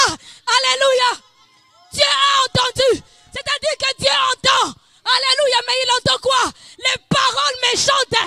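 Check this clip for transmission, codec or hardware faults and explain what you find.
No faults detected; nothing in the audio calls for a report.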